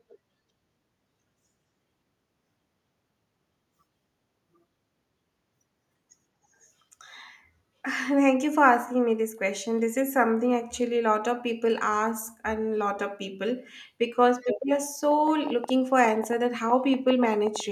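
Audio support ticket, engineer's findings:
Echo leak, 14.41 to 14.47 s: brief, faint delayed copy of the speech trailing about 204 ms behind, around 30 dB under the voice. Likely the far end's echo canceller on a speakerphone letting a scrap of its mic pickup back through.

Train of clicks, 15.11 to 17.61 s: around twenty sharp ticks at roughly 7.6 per second, unevenly spaced, peaking about 10 dB above the speech. Likely nearby electrical interference or a struggling interface injecting the same pulse shape over the audio.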